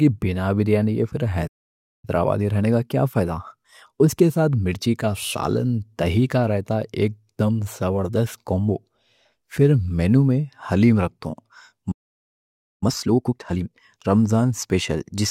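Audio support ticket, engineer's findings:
Playback stall, 1.47–2.05 s: speech cuts out mid-flow just after "بِنا بریانی ہے پھر", about 0.56 s of dead silence. Likely player buffer underrun or blocked audio thread, so no samples reach output until recovery. Playback stall, 11.91–12.83 s: same symptom, longer, about 0.90 s of silence. Same likely buffer starvation or thread block on the output path.

Time-compressed catch-up, 2.05–5.05 s: immediately after the first stall, speech runs about 1.1 times fast at normal pitch. Player trimming its backlog by dropping short segments and cross-fading the joins. Time-compressed catch-up, 12.83–13.73 s: after the second stall, far more aggressive, about 2 times speed, clearly rushed. Larger backlog, so heavier segment removal over a shorter window.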